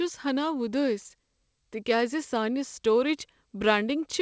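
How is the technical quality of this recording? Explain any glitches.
Nothing stood out on listening to this speech, which comes through a G.722 call path with no content above 8 kHz, as that codec normally delivers.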